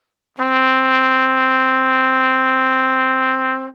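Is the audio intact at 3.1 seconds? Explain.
Yes, the sound at 3.1 seconds plays through intact, with no dropout, click, distortion or other fault at that moment.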